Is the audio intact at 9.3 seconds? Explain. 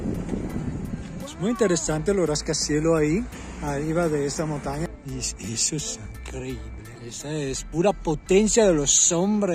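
Yes, the audio at 9.3 seconds is intact, with no dropout, click, distortion or other fault at that point.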